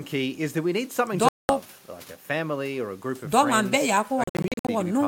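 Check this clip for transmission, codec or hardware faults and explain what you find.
Two faults, both heard as holes in the speech. From 1.29 to 1.49 s the sound cuts to silence for about 205 ms, then resumes further along, as if it kept playing unheard. This is likely a Bluetooth dropout, where packets arrive too late for the headphones and are discarded. From 4.24 to 4.69 s the speech breaks up into a series of short gaps, the longest 56 ms, totalling 280 ms of missing audio across 448 ms. The pattern points to the same Bluetooth dropout mechanism, with packets lost in bursts rather than one run.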